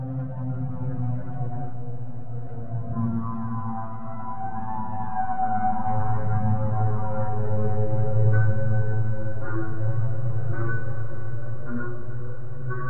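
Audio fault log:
The audio fault log has no fault to list.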